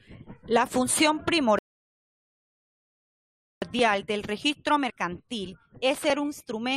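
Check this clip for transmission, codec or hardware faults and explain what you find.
There is one fault in this speech clip, a rebuffering stall. From 1.59 to 3.62 s the audio drops to silence for about 2.0 s, then picks up exactly where it stopped, with "del registro mercantil". The player ran out of downloaded audio and paused until more arrived, so nothing is skipped and time is simply added. A network dropout would be different: the audio would lose a piece and resume further on.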